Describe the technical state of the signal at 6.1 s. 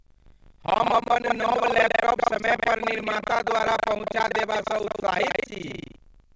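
At 6.1 s the writing program and the hardware reading the ring buffer have slipped out of step, so this is buffer tearing, present throughout the clip. Inside every 40 ms period a bit under half the buffer replays speech from around 150 ms earlier, producing a steady 25 Hz robotic rattle over the speech, on top of the call path's 8 kHz band limit.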